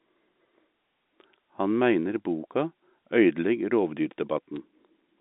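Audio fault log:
4.56 s: bit errors on a digital phone line. A brief cluster of sharp ticks, each from a single G.711 sample corrupted by a flipped high-order bit.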